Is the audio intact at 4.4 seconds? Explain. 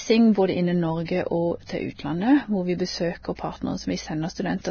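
No. At 4.4 s, as across the whole speech clip, the sound is hissy and grainy, with nothing above 6.6 kHz and smeared consonant onsets. This is likely heavy Vorbis compression, consistent with a bitrate around 18 kbps, where coarsely quantised treble detail turns into noise.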